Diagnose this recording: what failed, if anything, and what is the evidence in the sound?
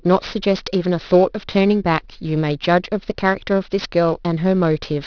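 Sibilants sound gritty and metallic across the whole clip, with spurious tones sitting roughly 20 dB below the speech and energy packed right up to 5.5 kHz. This is aliasing from a resampling stage. The sound points to a drop to about 11 kHz with no anti-alias filter, so content above 5.5 kHz folded back down as wrong, unrelated frequencies.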